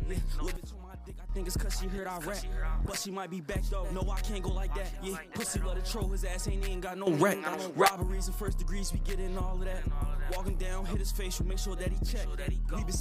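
A sudden gain jump occurs twice: from 0.56 to 1.29 s the level drops by about 12 dB, and from 7.07 to 7.88 s it rises by about 12 dB. Each time, the audio and its background noise step together from one level to another with no fade in between. This points to a digital gain change or bit shift applied instantly rather than ramped, likely a level setting switched mid-stream.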